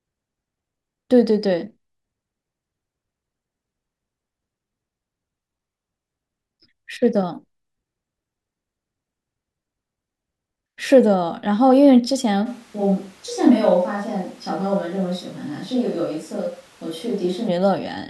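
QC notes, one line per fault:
12.47 to 17.47 s, switch to a distant microphone: the speech abruptly turns roomy and hollow, thinner in the bass and roughly 5 dB quieter, with room noise rising to around 30 dB below the speech, then snaps back just as suddenly. The likely cause is the close microphone dropping out and a farther one taking over. The hard cut in and out, with bass, level, noise and room sound all changing together, sets it apart from added reverb or a gradual fade.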